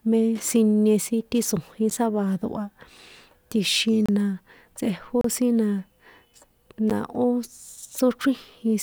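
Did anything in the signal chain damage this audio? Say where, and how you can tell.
Yes. The speech drops abruptly to dead silence four times: short ticks at 1.9 s and 6.9 s, and brief holes at 4.06–4.09 s and 5.21–5.24 s. These blocks of digital silence point to the driver or buffer stage. The two 10.7 ms gaps fit a 512-sample buffer that wasn't filled in time, so zeros were played instead.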